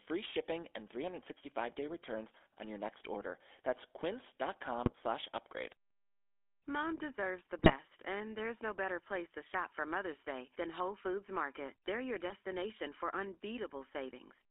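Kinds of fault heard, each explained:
GSM full-rate codec: a band held to 300 Hz to 3.5 kHz with a steady buzzy, gravelly roughness on speech, which separates it from a clean telephone band-limit.
GSM bit errors: brief squawks and gargling near 4.86, 7.58 to 7.75 and 12.29 s, where corrupted decoder values distort or spike the sound instead of muting it like dropouts.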